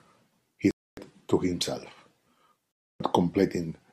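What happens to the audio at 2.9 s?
A Bluetooth dropout at 2.78 to 3.00 s cuts the speech to abrupt silence. It likely comes from audio packets reaching the headphones too late and being discarded. The speech then resumes as if it had kept playing, with roughly 0.28 s of it lost.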